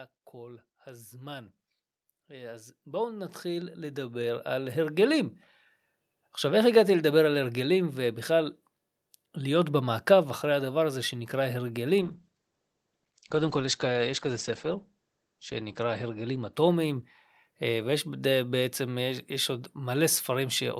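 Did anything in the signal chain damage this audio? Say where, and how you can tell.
Yes. Automatic gain rising in the call processing: from 0.32 to 1.57 s it climbs about 4 dB, then about 13 dB from 2.27 to 5.31 s. The waveform envelope and background swell together.

A call bitrate drop in the codec runs from 12.02 to 18.35 s. The spectrogram's top edge falls from 20 kHz to 8 kHz, and the sound turns coarse and watery, consistent with a bitrate drop from around 64 to 10 kbps.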